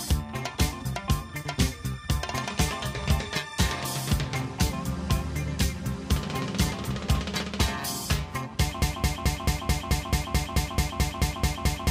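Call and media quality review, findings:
Broken-record loop from 8.82 s to end of clip: a 0.22 s fragment repeats back to back, 14 times. Likely a stalled player or stream buffer re-sending its last held fragment. Intended audio for that span is lost.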